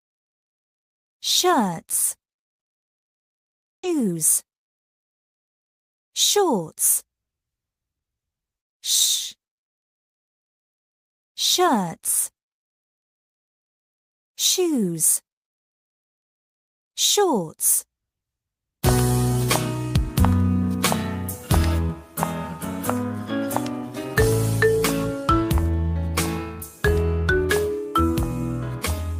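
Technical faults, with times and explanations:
3.83 s, skip ahead: a stretch of roughly 0.7 s of audio never reached playback, either lost in transit or dropped when the jitter buffer overflowed while later audio was already queued. Nothing was inserted to cover the loss, so playback jumps straight forward and the sound on either side is butted together with no gap. The missing piece simply vanishes.
3.93–5.29 s, jitter buffer speed-up: after the jump, the receiver's buffer still held more audio than its target, so it repeatedly cut out short slices of one or a few pitch periods to bring the delay down. About 70 ms in total was trimmed across this stretch, which makes playback run at roughly 105% speed while keeping the pitch unchanged. The effect is a slightly hurried, compressed feel to the sound for just over a second.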